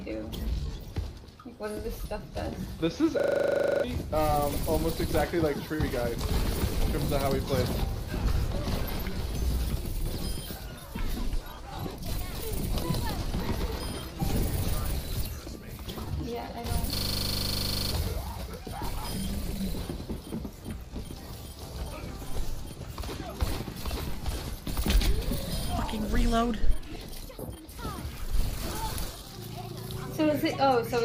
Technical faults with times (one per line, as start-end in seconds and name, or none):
3.20-3.84 system hang loop
16.96-17.92 system hang loop